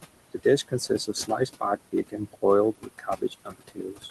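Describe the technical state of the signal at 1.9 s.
At 1.9 s the signal sits inside a stretch of speech cut by the noise suppressor, running from 1.81 to 2.43 s. The suppressor mistook quieter parts of the speech for background and pulled them down with it, by about 21 dB at the deepest, over roughly 150 ms in total. They sound swallowed or faint rather than missing. Unlike a packet dropout, there is no hard silent gap, and the loudest parts of the sound come through.

Underneath, the noise suppressor artifacts heard across the whole clip are present too. The room noise, about 14 dB below the speech, is pushed down by about 20 dB between sounds and lets up under them.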